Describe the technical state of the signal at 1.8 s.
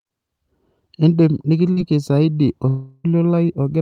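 Short concealed packet loss runs from 1.73 to 1.79 s. About 40 ms of speech arrived too late to decode. The receiver patched 33 ms by extending the preceding sound, then crossfaded back. It is heard as a brief smear or wobble.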